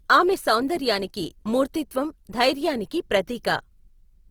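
Speech clip with plainly audible Opus compression throughout: band-filled, grainy, rough texture with content extending to about 20.2 kHz, likely a fullband CELT-mode encode around 24 kbps.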